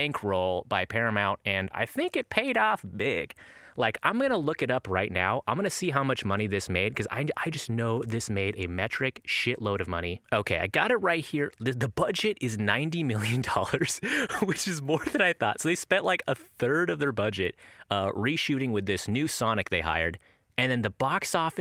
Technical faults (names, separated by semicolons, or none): none